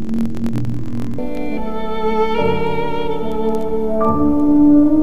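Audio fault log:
0.00–1.20 s, interleaved audio read as planar: the sound drops a full octave and turns doubled and choppy. Each 23.22 ms block, which fits a 1024-sample block, has its alternating left and right samples split into halves and stretched to half speed, so the pace holds while pitch halves. On a spectrogram, harmonics sit at half their frequency with vertical seams every 23 ms (43.1 Hz). The waveform shows abrupt steps at each block boundary.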